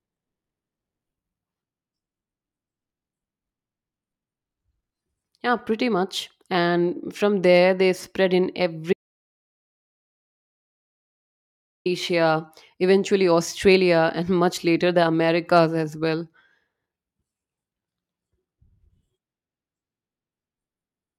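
The input feed was likely lost between 8.93 and 11.86 s, with the recorder writing silence, an audio dropout to silence. Right after "there they spread in", the speech cuts out into dead silence with no room tone for about 2.9 seconds, and that stretch is gone.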